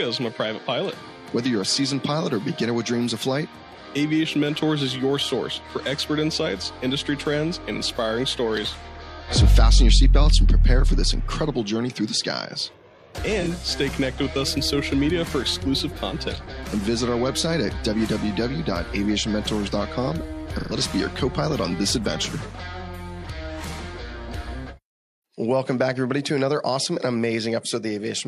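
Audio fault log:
13.41–13.48 s and 20.58–20.73 s, AAC frame loss with concealment: brief smeared, noisy patches, about 43 ms and then 128 ms long. The decoder rebuilt the missing stretches from the last good spectrum, which fits one lost frame, then three.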